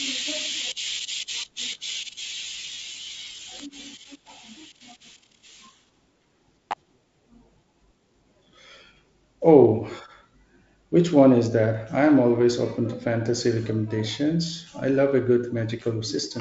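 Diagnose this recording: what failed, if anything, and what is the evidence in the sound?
Electrical switching spikes in the analogue wiring: a sharp snap or tight click cluster at 3.59 s and again from 6.71 to 6.73 s over the speech, likely from a nearby switch arcing into the line. The waveform shows vertical needles, and the spectrogram shows full-height stripes up to the G.722 ceiling near 7.7 kHz.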